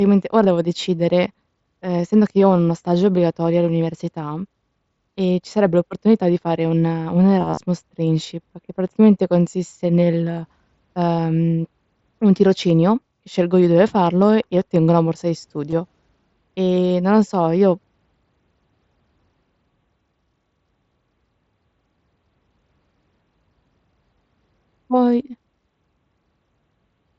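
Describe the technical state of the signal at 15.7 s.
At 15.70 to 15.73 s the Bluetooth link between headset and phone dropped voice packets, about 22 ms of audio, which fits a short run of lost mSBC frames. This concealed Bluetooth headset packet loss was patched by the receiver, which repeated the best-matching piece of the preceding waveform. The gap is therefore filled rather than silent, heard as a brief buzzy, held tone at full level and a slight warble as real speech resumes within the codec's 8 kHz band.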